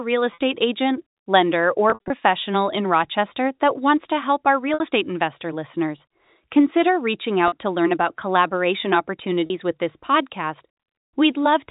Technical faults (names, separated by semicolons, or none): packet loss with pitch repetition